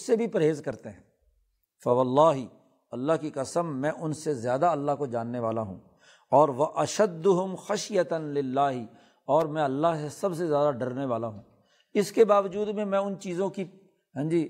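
At 9.41 s a sharp snap, likely an electrical switching spike from a nearby arc, shows as a thin full-band vertical line on the spectrogram.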